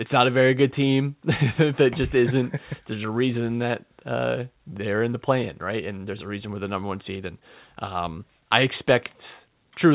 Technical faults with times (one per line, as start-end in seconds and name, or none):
none